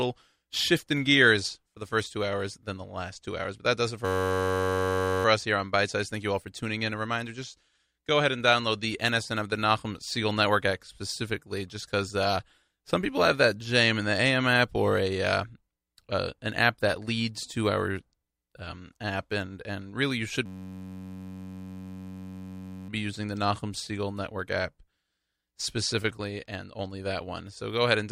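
Speech, twice interrupted by a steady buzz at about 94 Hz, from 4.05 to 5.25 s after "that does it" and from 20.46 to 22.89 s after "and really you should". This is a system hang loop: the computer froze while the sound hardware kept replaying one 10.67 ms slice, which fits a 512-sample buffer.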